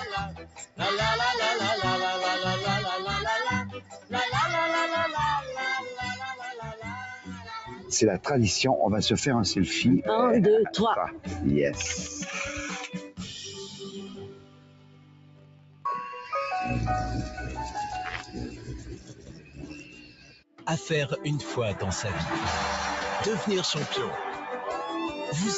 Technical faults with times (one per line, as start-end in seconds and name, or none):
0.00-25.58 noise suppressor applied to music or sounds
0.00-0.81 sound cut by the noise suppressor
3.72-4.14 sound cut by the noise suppressor
6.35-7.91 sound cut by the noise suppressor
12.92-15.85 sound cut by the noise suppressor
18.23-20.67 sound cut by the noise suppressor